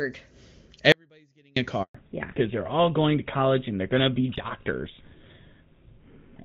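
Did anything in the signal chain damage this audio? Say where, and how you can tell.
Yes. From 0.92 to 1.56 s the sound drops to a faint residue about 35 dB down, not silence, so the path stayed live. This is likely an audio dropout at the network stage.

A network handover gap runs from 1.83 to 1.95 s: 120 ms of true silence, cleaner than the residue-filled dropout, as frames stop during the switch.

From 1.95 s a fallback to narrowband in the codec stage removes everything above 4 kHz. It is a lasting duller, rougher tone, consistent with GSM full rate replacing HD Voice.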